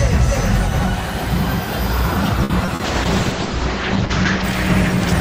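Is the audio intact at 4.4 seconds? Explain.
No. A call bitrate drop runs from 2.84 to 4.50 seconds. The encoder's rate falls from 96 to 8 kbps, so it codes coarsely. The audio bandwidth narrows from 20 kHz to 8 kHz. At 4.4 seconds the sound is muffled and rough.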